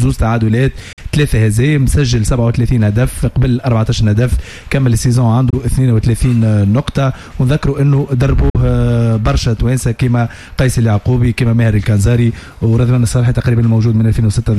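A Bluetooth dropout, likely, at 0.93 to 0.99 s, 5.50 to 5.54 s and 8.50 to 8.57 s: the sound cuts abruptly to silence for roughly 46, 23 and 46 ms, then resumes further on, which fits one or two late packets being dropped before the headphones.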